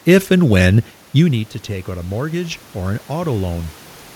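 From 1.23 to 3.78 s, after "if and when", voice and room noise swell together by about 5 dB. This is automatic gain rising slowly to offset an input level that fell about 12 dB.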